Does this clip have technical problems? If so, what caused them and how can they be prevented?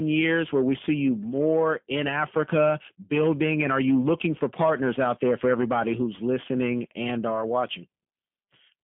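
Yes. G.729 codec damage runs throughout. Nothing above 3.5 kHz survives, and the rough, synthetic texture fits an 8 kbit/s G.729A encoder rebuilding speech from a few pulses. Use a wideband codec such as G.722 or Opus.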